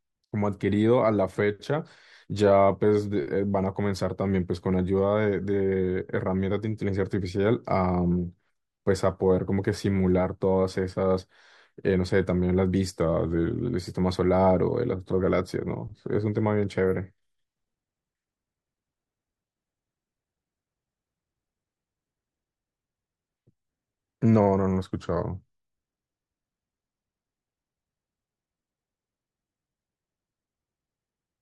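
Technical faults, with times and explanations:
13.01–13.63 s and 24.93–27.37 s, drift correction step: speech slows 5.9% and drops about a semitone, then snaps back. This is likely a clock-sync rate jump, held steady rather than wobbling like flutter.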